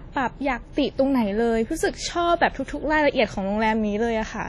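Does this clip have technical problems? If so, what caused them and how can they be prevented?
Yes. Throughout, the speech rings and sounds washy, with hiss that breathes with it and nothing above 12.7 kHz. This is likely heavy WMA compression at a low bitrate, which fits about 32 kbps. Long transform blocks smear quantisation noise, and weak detail is zeroed. Prevent it by encoding at a higher bitrate.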